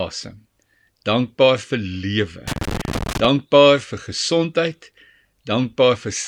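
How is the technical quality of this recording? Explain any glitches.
The recording has one glitch in the speech. From 2.48 to 3.25 s there is loose connector crackle: a worn or dirty contact intermittently makes and breaks, chopping the signal and popping with any DC present. Its irregular, scratchy bursts set it apart from evenly spaced digital clicks.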